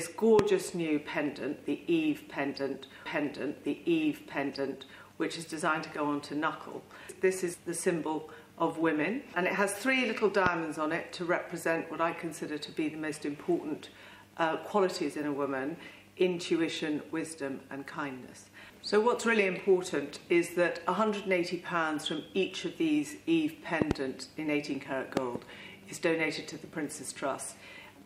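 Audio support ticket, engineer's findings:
Loud pops at 0.39–0.41 s and 10.46–10.49 s, plus double pops at 23.82–23.93 s and 25.17–25.38 s, roughly 20–25 dB over the programme, audio carrying on underneath. Likely a plug, switch or static pulse shaped by the downstream circuitry.

Stream segment repeated at 3.06–5.04 s: about 1.98 s of audio plays a second time, with a small blip at the jump back. Player fetched or queued the same segment twice; check the buffering and segment-index logic.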